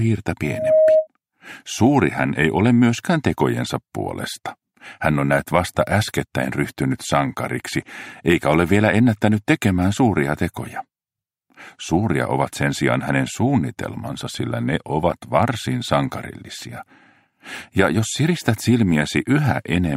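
From 0.43 to 1.07 s there is loudspeaker feedback squeal: the microphone is hearing its own loudspeaker, and at 628 Hz the loop gain exceeds unity. That tone swells over roughly a third of a second into a steady squeal several decibels louder than the programme.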